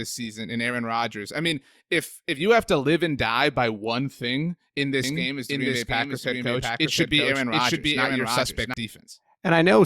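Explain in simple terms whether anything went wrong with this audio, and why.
Two things go wrong in the second half of this speech clip.

From 5.04 s to 8.74 s, just after "by one thing in", there is a doubled audio track. A second, somewhat quieter copy of the speech runs about 0.7 s behind the first. Unlike a room echo, it doesn't fade away. It is clear and starts and stops abruptly. The likely cause is the sound being captured twice, with one path running late.

At 5.16 s there is a corrupt frame decoded: a brief squeak or blip. It happens because damaged compressed data, probably a few short frames, was played anyway. Wrong sounds briefly appear at the wrong pitches.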